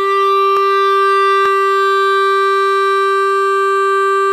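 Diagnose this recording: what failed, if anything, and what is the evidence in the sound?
Two isolated sharp clicks cut through the music at 0.57 s and 1.46 s, each a thin vertical line across the spectrum. These are most likely dropped samples at the driver or buffer stage: a fraction of a millisecond goes missing, so the waveform jumps. Unlike a dropout, no audible sound disappears.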